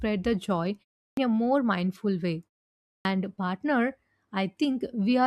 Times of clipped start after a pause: 1.06-1.17, 2.93-3.05

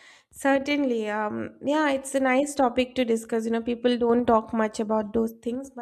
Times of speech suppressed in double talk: none

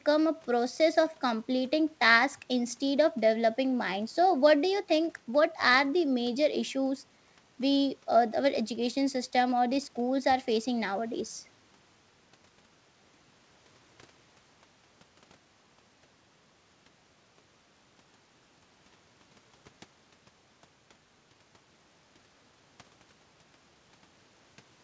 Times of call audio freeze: none

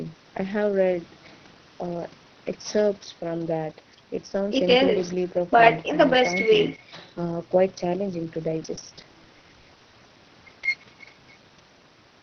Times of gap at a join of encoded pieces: none

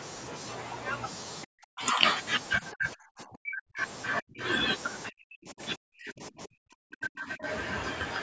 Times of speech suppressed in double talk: 1.45-2.06, 2.59-3.81, 4.20-4.43, 5.09-7.47

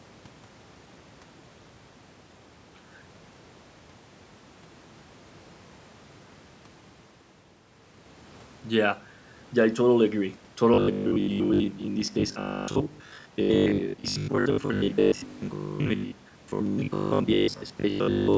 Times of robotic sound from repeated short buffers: 10.74-18.37

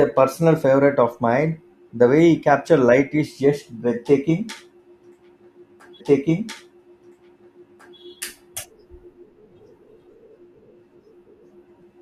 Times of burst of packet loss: none

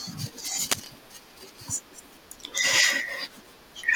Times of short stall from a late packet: none

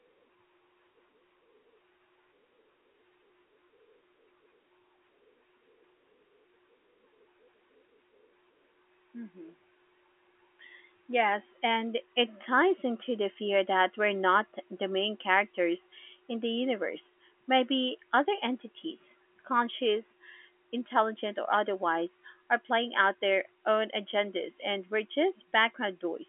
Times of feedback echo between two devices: none

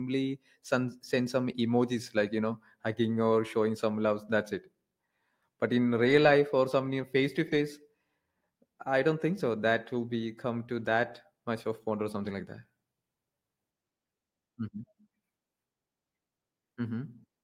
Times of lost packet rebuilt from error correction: 5.99-6.33, 7.47-7.57, 10.75-10.81

